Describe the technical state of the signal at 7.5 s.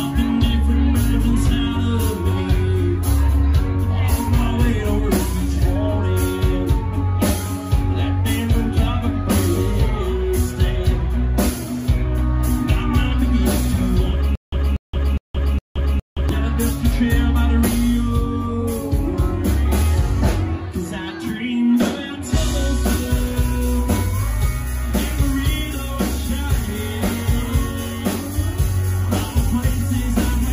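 At 7.5 s the signal is intact, with no audible dropout, distortion, click or other technical fault at that moment.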